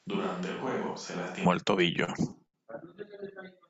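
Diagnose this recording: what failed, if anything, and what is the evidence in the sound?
A switch to a distant microphone is audible from the very start until 1.45 s. The sound is roomy and hollow, thin in the bass, roughly 10 dB quieter than what follows, with room noise about 35 dB below the speech. At 1.45 s the close, full tone snaps in abruptly. This points to the capture stage: the close microphone's feed was likely missing, so a farther pickup supplied the signal before the close one took over.

Repeated stalls (stutter) run from 1.95 to 2.98 s. There are nine short holds across that second, the longest lasting 77 ms, adding about 167 ms of drawn-out sound, roughly a sixth of the span. No audio is actually lost; the delivery drags and hiccups instead. This is a network and jitter-buffer fault: packets arrived late, the buffer kept running dry, and the receiver stretched the last sound each time until fresh data arrived.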